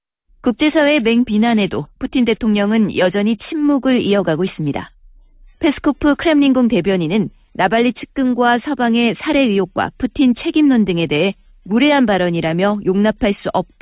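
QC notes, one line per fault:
No faults detected.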